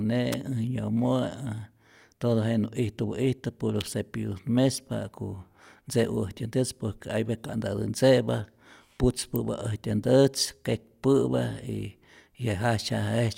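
Three sharp snaps cut across the speech, at 0.33 s, at 3.81 s between "ijtupä'istä puro" and "cepillutät mespa", and at 9.36 s. Each is a brief, hard click sitting on top of the talking rather than replacing it, over within about a hundredth of a second. These are electrical switching spikes, likely from a nearby switch, motor or static discharge arcing and coupling a short burst of interference into the audio line.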